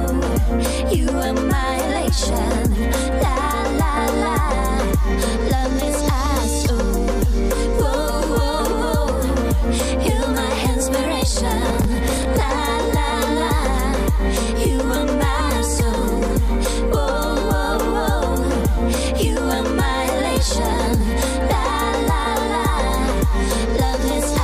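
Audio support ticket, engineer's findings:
Processor overload crackle, 11.69 to 12.25 s. Gritty tearing burst over the audio, stops cleanly after. Probable component: audio processing thread on a loaded CPU. Mechanism: consecutive buffer deadlines missed, about ten in a row. Each miss replays a slice of old audio with hard edges. Spacing fits buffers of roughly 10 ms. Clears when load drops.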